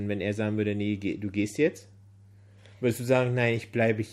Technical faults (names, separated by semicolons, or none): Bluetooth SBC bit pool drop